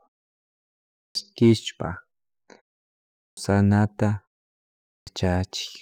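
At 0.93 s, 3.16 s and 4.86 s the speech comes back after a pause with a clipped start. After each silence (about 0.93, 0.63 and 0.67 s long), the output device seems to need time to wake, so roughly 0.21 to 0.22 s of onset is swallowed and the speech lurches in already underway. This differs from muted pauses, where the background drops out during silences but every sound returns intact. Here the opening of the speech itself is missing.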